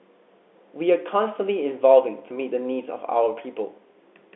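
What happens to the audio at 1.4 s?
Nothing goes wrong at 1.4 s; the speech carries on intact through that moment, with the narrow telephone band of the G.711 line the same as before.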